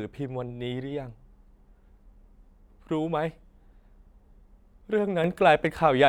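A sudden gain jump hits this speech recording at 5.24 s: the digital gain steps up by about 6 dB between one sample and the next and stays there until the clip ends at 6.08 s. The cause is likely a level setting or bit shift applied without any ramp. Because the change happens ahead of everything in the signal, the speech and the background noise get louder together in a single abrupt step instead of swelling gradually.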